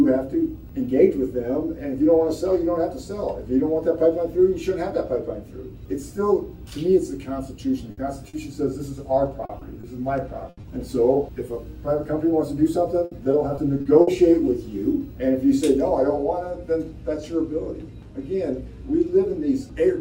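At 7.91 to 7.99 s there is a burst of packet loss: roughly 60 ms of consecutive packets never arrived in time, so the receiver stretches the last sound and fades it as a held buzz or hiss. The audio then jumps ahead with that stretch missing. This audible hold-and-fade sets it apart from the shorter hiccups.

Short concealed packet losses follow at 8.29, 9.45, 9.59, 9.81 and 10.61 s, each 20 to 40 ms. The decoder patches them and blends straight back, so they sound like a brief smear or wobble rather than a drop-out.

A second burst at 10.49 to 10.59 s hides about 80 ms behind a fading continuation.

From 13.05 to 14.09 s, repeated packet loss gives a robotic sound. Six gaps land within one second, the longest 60 ms, covering about a fifth of the span. The recurring patches make it choppy instead of a single glitch.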